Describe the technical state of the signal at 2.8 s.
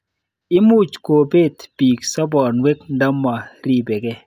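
At 2.8 s the speech signal is intact, with no audible dropout, clipping, distortion or other technical fault at that point.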